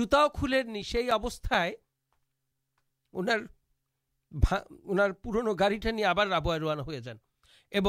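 A speech recording carries a run of ten sharp, evenly spaced ticks between 0.53 and 1.83 s, roughly eight per second, the longest about 5 ms. These are CD scratch ticks: a disc blemish defeats error correction once per revolution, so the player conceals each damaged patch of samples.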